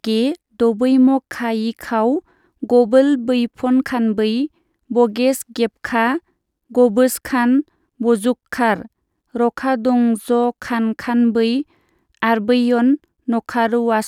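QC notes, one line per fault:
No faults found.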